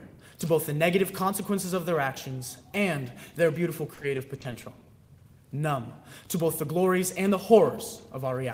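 From 3.94 to 4.86 s the stream suffers repeated packet loss, with data arriving lost or late in a rapid string of brief holes, none longer than 30 ms. The decoder papers over each one by extending the preceding sound, covering about 130 ms in all, while roughly 90 ms goes missing outright. With concealment filling about 15% of that stretch, the sound turns choppy and stuttering, with small pieces dropped out.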